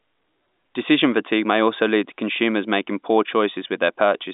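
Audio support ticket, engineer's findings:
No faults found; the speech sits in a telephone line band of about 200 Hz to 3.7 kHz, consistent with G.711 A-law coding.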